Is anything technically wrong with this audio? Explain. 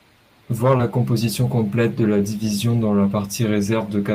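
Yes, there's one glitch in this speech. From about 0.77 to 0.81 s, right before "composition complète de la", you get a short concealed packet loss. Roughly 20 ms of audio didn't make it to the decoder in time, so the receiver papered over the gap by extending the preceding sound for about 16 ms and then crossfading back into the real signal. What you hear is a quick smear, almost a little wobble, just ahead of that phrase.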